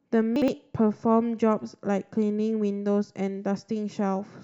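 From 0.36 to 0.48 s, chunks out of order: one 60 ms chunk plays one slot late, jumbling the speech, though nothing is missing or repeated.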